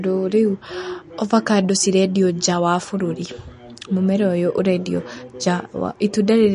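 From start to finish the speech carries plainly audible codec damage, most likely MP3 compression at a low bitrate, somewhere around 40 kbps. Nothing comes through above about 10.6 kHz, so the top end sounds shaved off. With so few bits, the encoder drops the weaker frequency detail and lets it flicker in and out from frame to frame. That gives the speech a watery, swirly texture, and the s sounds and consonant onsets come out smeared and metallic.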